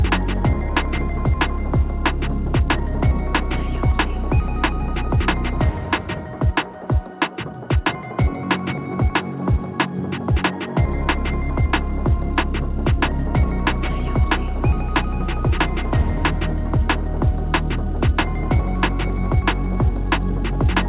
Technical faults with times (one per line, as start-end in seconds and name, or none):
none